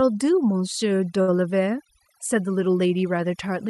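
Right from the start, the whole clip carries overdone noise removal. The noise reducer was pushed too hard, so any frequency band that sits close to its noise estimate gets dropped nearly to nothing, and the quieter parts of the speech go along with it. You hear that as an almost dead background sprinkled with little twinkling specks.

Then between about 1.21 and 1.31 s there's a short stall from a late packet. A packet didn't show up in time, the jitter buffer ran dry, and the receiver stretched the last bit of sound for roughly 64 ms until the packet arrived. It then picked up right where it left off, so nothing is actually lost, but that moment hangs a touch too long. The top end of the call path rolls off around 12 kHz, which points to an Opus-style call codec.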